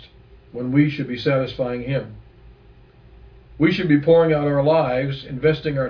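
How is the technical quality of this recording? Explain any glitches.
No glitches or technical faults are audible anywhere in the recording.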